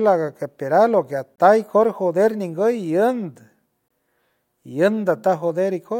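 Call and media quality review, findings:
Gap between chunks, 1.36–1.38 s, right after "que ateral o que", and 3.88–3.91 s. Two 23 ms silent holes with hard edges, 2.5 s apart. Probable component: chunked transport or player, inserting padding or starting each chunk late. Not packet loss: nothing is missing, and speech resumes exactly where it stopped. The strict 2.5 s period points to chunk boundaries rather than random network dropouts.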